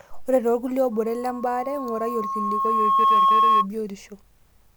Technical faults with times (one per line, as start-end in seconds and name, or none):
0.92-3.67 loudspeaker feedback squeal